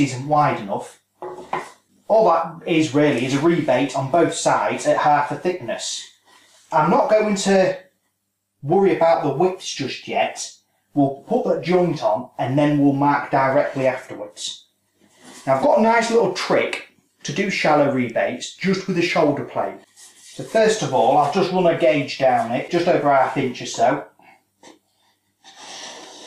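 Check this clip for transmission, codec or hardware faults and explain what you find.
No transmission, codec or hardware faults can be heard anywhere in this clip. There is nothing in the audio that calls for an explanation.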